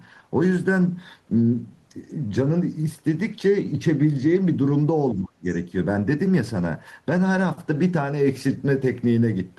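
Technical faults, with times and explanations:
5.15–5.47 s, speech suppressed in double talk: the voice drops sharply for about a third of a second, sinking by something like 40 dB at its deepest before coming back. It sounds as though someone briefly turned the talker's own level down. The likely cause is both ends talking at once. The echo canceller couldn't separate the near talker from the loudspeaker echo, so it clamped down on everything in the mic signal together.
5.51–5.56 s, other side's voice leaking through: right after the speech recovers, a short scrap of a second voice slips in for about 50 ms. It sits far back, roughly 30 dB under the main speech, so you hear it as a faint fragment. This is likely residual echo: the far end playing on the talker's loudspeaker was picked up by the mic, and the canceller didn't scrub all of it out.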